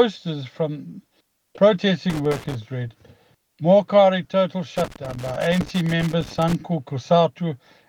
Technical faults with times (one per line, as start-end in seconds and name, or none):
2.10-2.55 loose connector crackle
4.77-6.55 loose connector crackle